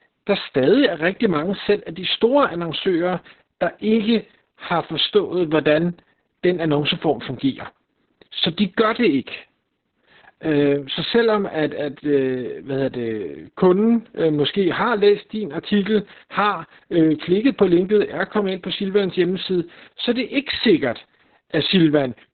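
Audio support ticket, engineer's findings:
Opus voice compression, whole clip. Speech muffled, hoarse, faintly robotic; nothing above 4.3 kHz. Sounds like narrowband SILK at a very low bitrate, around 6 kbps, with coarsely coded excitation. A plain low-pass would dull the sound without the rasp.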